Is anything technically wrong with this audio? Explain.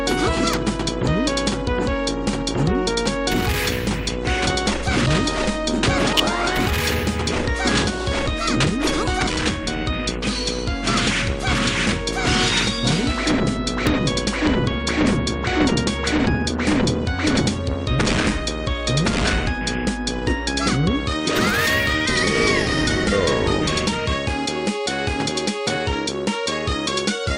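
Yes. Three electrical switching spikes appear at 0.53 s, 6.18 to 6.20 s, and 13.87 s. A nearby switch, motor or static discharge likely arced into the audio line, so each one lands as a sharp snap on top of the sound, peaking around -5 dBFS.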